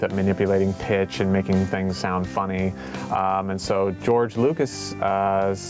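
Gain pumping runs through the whole clip, a level swing of roughly 15 dB. The cause is likely input gain set far too high, with a fast limiter clamping every peak, squashing the dynamics. The call microphone processing band-limits the audio to 8 kHz.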